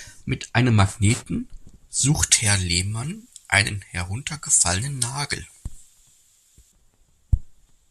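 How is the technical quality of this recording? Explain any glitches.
The speech turns thin, bright and hissy from 2.23 s to 6.72 s, with sibilants sharply exaggerated. This is pre-emphasis left on: treble was boosted for transmission, in a shape that fits the J.17 curve, but the matching de-emphasis was never applied, leaving 10 kHz about 11 dB hotter than 1 kHz.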